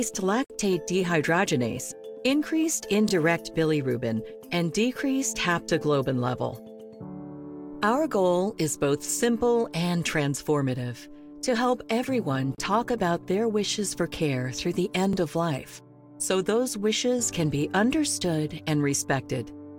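Gap between stream segments at 0.44 s, lasting about 55 ms, and again at 12.55 s for about 32 ms. Timestamps on adjacent segments, spaced every 6 s, fail to meet, so the player fills the hole with silence. The sound cuts out abruptly with hard edges, but nothing is lost.

Overlapping chunks at 3.09 s, 9.11 s and 15.13 s. Each 6 s chunk begins before the previous one ends, so about 23 ms of sound plays twice at every join, producing a brief stutter or click at a steady 6 s interval.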